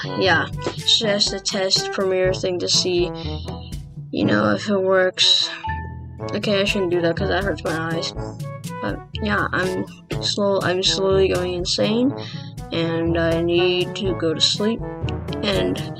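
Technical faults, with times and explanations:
No technical faults can be heard anywhere in the signal.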